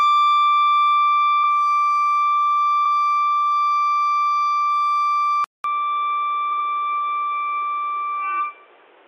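At 1.43 s and again at 2.85 s there is a stutter from repeated frames: a 46 ms stretch, which fits two compressed frames, plays twice. The waveform shows the same shape twice in a row, and the spectrogram shows a short copied slice.

At 5.44 s the sound cuts out for about 200 ms. It then comes back at roughly the same level but duller, with nothing above 3.8 kHz. A new noise floor sits about 30 dB down. The likely cause is the input switching to a poorer device. On a spectrogram this appears as a gap followed by a hard ceiling at 3.8 kHz.

At 6.51 s a 70 ms block of repeated frames plays three times, adding 139 ms, and is heard as a longer triple stutter.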